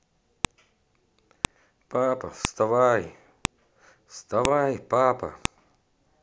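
Sharp, loud clicks cut through the speech at 0.45, 1.45, 2.45, 3.45, 4.45 and 5.45 s, about 1 s apart. This is a file header played as audio: one-second WAV pieces were joined without stripping their headers, so those header bytes play back as a brief snap.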